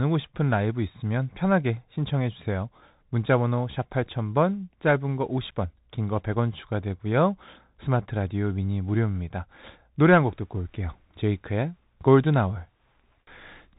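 From start to finish, the speech has gone through a Bluetooth CVSD headset codec, and the damage is plain to hear. Nothing gets past about 3.8 kHz, so the whole clip sounds boxed-in and telephone-like. CVSD sends just one up-or-down bit per sample, which fits a 64 kbps link, and its step size can't keep up with loud, bright moments, so those distort. S sounds come out scratchy, with a grainy hiss sitting under everything.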